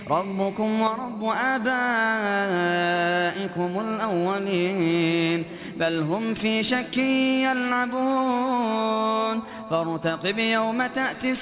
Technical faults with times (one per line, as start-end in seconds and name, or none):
none